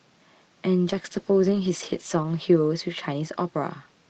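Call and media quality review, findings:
From 0.86 s onward, speech goes rough and watery, worst for 1.29 s. Call bitrate drop: fits Opus falling from 64 to about 13 kbps, coarser coding.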